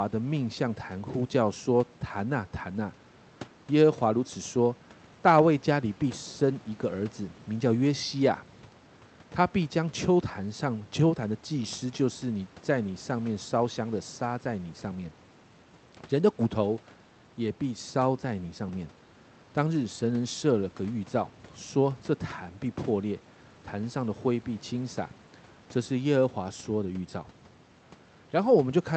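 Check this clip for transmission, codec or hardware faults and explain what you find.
No transmission, codec or hardware faults to report.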